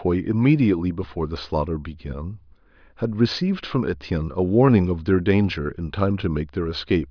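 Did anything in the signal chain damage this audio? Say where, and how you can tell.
No, nothing audible in this speech points to damage at any stage of the chain.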